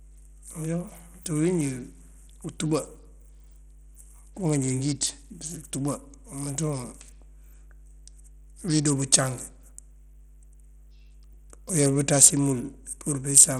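Speech runs over a mains hum for the whole recording. The hum is a steady 50 Hz tone with a few low harmonics, sitting roughly 25 dB below the voice. A ground loop or nearby transformer lets the power line leak into the signal. Its pitch separates it from 60 Hz hum. Its smooth, narrow low end separates it from buzz, which carries a sharp spray of upper harmonics. It also differs from rumble, which wanders rather than holding one tone. Throughout the clip the treble drops out and flickers, and a gritty, aliased noise clings to the voice. These artefacts point to Bluetooth SBC compression at a low bit pool, which fits a rate of around 80 kbps. The likely mechanism is that the codec splits the band into a few wide sub-bands and starves the weak upper ones of bits. A fixed low-pass filter would roll off the top cleanly and steadily. Here the top keeps switching on and off.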